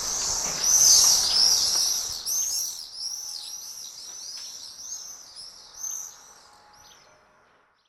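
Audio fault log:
No faults heard.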